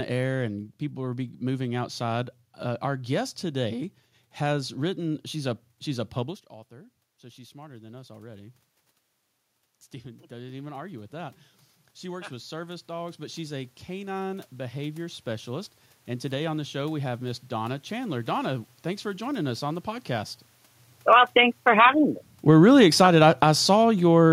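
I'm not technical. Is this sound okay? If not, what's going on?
No. Three times the recording level drifts on its own. After the talker moves away around 6 seconds, automatic gain rising slowly swells the voice and room noise up, from 6.21 to 8.61 seconds and again from 10.02 to 17.48 seconds. After the talker moves again near 20.5 seconds, automatic gain falling gradually sinks everything back down, from 20.95 to 24.28 seconds.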